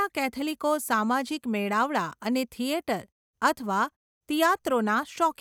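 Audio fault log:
No faults heard.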